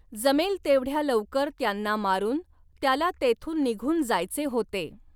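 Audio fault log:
No faults heard anywhere in this speech recording.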